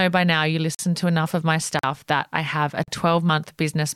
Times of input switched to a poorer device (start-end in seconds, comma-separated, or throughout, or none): none